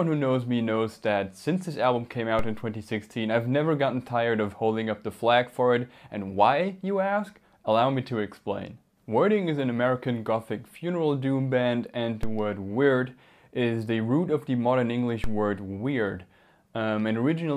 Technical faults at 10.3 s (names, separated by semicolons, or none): none